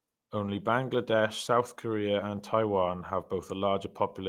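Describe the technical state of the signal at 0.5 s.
At 0.5 s the signal is inside a lost packet rebuilt from error correction, running from 0.43 to 0.57 s. The packets were lost, but each following packet carried a low-bitrate copy that the decoder played, so there is no gap. About 80 ms of rebuilt audio sounds rougher and noisier, which fits four 20 ms packets. The waveform stays continuous, and the spectrogram shows grainier, less defined texture across the span.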